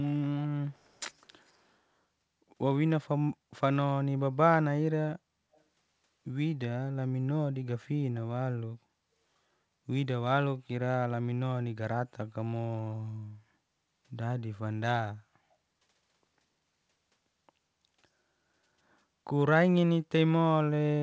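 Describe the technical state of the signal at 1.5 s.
At 1.46–1.53 s a very faint echo leak appears: a delayed copy about 211 ms behind, likely from incomplete echo cancellation, showing as a weak smeared spectrogram trace.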